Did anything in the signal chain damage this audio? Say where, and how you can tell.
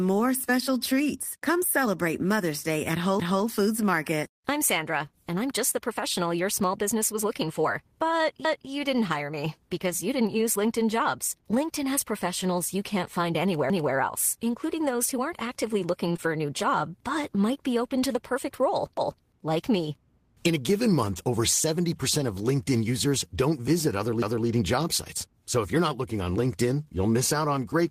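Yes. The damage sits in a chunked buffer stage and in the network path.

Overlapping chunks appear at 3.20, 13.70, 18.97 and 24.22 s. At each of these joins, 250 ms of audio plays twice, heard as a stutter. On the waveform, the same quarter-second shape repeats back to back. On a spectrogram, a copied block of formant pattern starts at a hard vertical edge.

A short stall from a late packet runs from 16.12 to 16.16 s. The jitter buffer ran dry and the receiver held the last sound for 23 ms, then resumed in the same place with nothing lost. On the spectrogram, the harmonics freeze into flat horizontal lines for that stretch.

Short concealed packet loss follows immediately, from 16.16 to 16.20 s. About 20 ms never arrived, and 16 ms of synthetic fill covered the gap, so it sounds like a brief smear. On the waveform, the fill continues the last sound before it blends back into the real signal.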